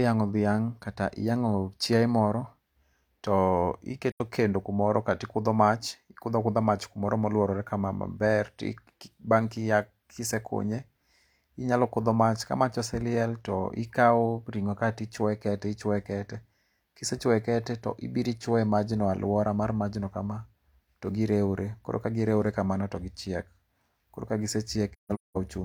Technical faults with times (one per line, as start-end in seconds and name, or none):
4.11-4.21 AAC frame loss with muting
24.93-25.37 AAC frame loss with muting